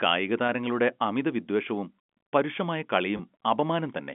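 At 0.47 s, just before "അമിതവിദ്വേഷവും പരുഷമായ", the speech briefly holds and turns buzzy. This is packet loss with pitch repetition. About 20 ms of audio went missing, which fits two lost 10 ms packets, and the receiver filled the gap by repeating the last pitch period. The same fault recurs from 3.17 to 3.19 s, right after "അമിതവിദ്വേഷവും പരുഷമായ", again a 20 ms gap heard as a short, slightly frozen buzz on the G.711 telephone-band line.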